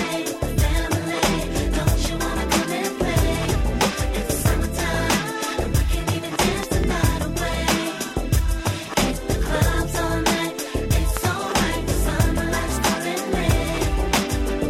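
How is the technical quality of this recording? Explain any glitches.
Loud pops interrupt the recording twice. Between 6.63 and 6.86 s there are two sharp pops in quick succession, and a single pop lands at 11.17 s. Each peaks about 15 dB above the surrounding sound, which continues underneath. The likely cause is a sudden voltage step or pulse, from a switch, a plug, static or a driver glitch, added to the signal and then shaped by the circuitry that follows. On a waveform each pop shows as a tall narrow spike. On a spectrogram it appears as a bright vertical stripe spanning the full frequency range.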